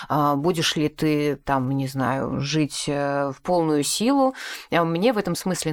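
No technical faults are audible.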